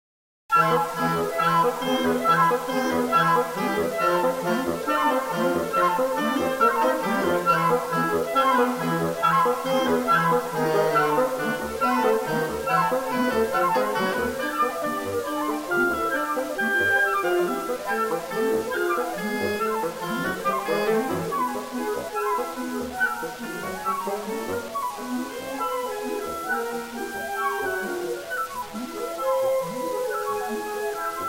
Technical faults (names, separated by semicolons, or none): low bit depth without dither